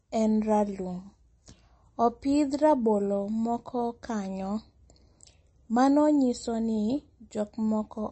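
Low-bitrate MP3 compression is the likely cause of the damage across this speech recording, and the degree of it fits a rate around 32 kbps. Short of bits, the encoder has cut everything above 8.3 kHz and dropped weak frequency lines frame by frame, leaving a plainly audible watery, swirling texture throughout.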